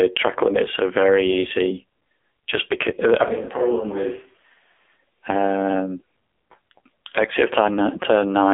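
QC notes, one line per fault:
Throughout, AMR narrowband mobile codec: the speech was squeezed through AMR-NB at a low rate that fits 5.9 kbps, with the line band near 300 Hz to 3.6 kHz and nothing above 3.7 kHz. So the voice is dull and boxy, and the heavy coding damage leaves it buzzy and synthetic.
3.24 to 4.95 s, switch to a distant microphone: right after "because I" the close signal drops out, likely replaced by a microphone further away. The voice turns roomy and hollow, with thinner bass. The level falls by about 10 dB, and room noise rises to about 35 dB below the speech. It snaps back just as suddenly at 4.95 s.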